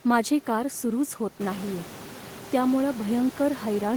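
No technical faults can be heard in the speech; the only change is the room's own background noise, which rises by about 11 dB around a second and a half in and then stays about 19 dB below the speech.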